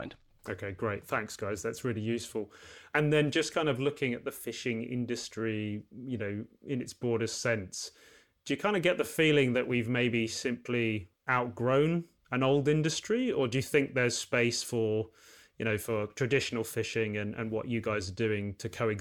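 No technical faults can be heard anywhere in the recording.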